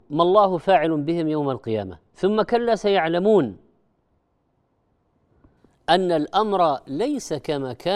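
A de-emphasis treble cut was applied wrongly to this speech recording from 0.00 to 5.57 s, sloping the response smoothly downward so that 10 kHz sits about 14 dB below 1 kHz. The speech sounds dull and muffled, its upper detail rolled away.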